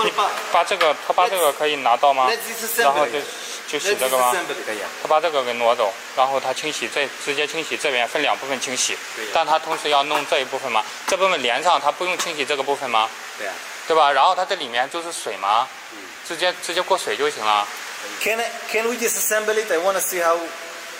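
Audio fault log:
No faults are heard anywhere in the audio. Nothing in it calls for an entry in this log.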